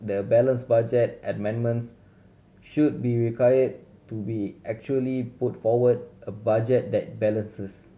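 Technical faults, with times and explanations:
No technical faults are present, so there are no times or explanations to give.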